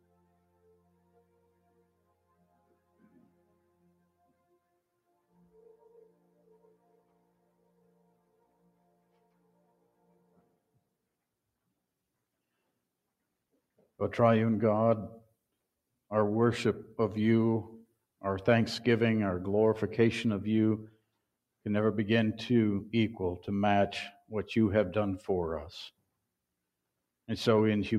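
Right from the start there's a noise suppressor applied to music or sounds here. It's a speech-style processor that treats sustained, steady material as noise, so the level keeps swinging by around 20 dB. Onsets survive while held parts and tails duck, giving a pumping, thinned-out feel.

The longest stretch is 0 to 10.96 s, where it's sound cut by the noise suppressor, pulled down as much as about 16 dB. The steady material sags and the decays get chopped short. There's a quick repeat of the same cut at 20.91 to 21.21 s, also dropping about 16 dB, heard as a brief dip.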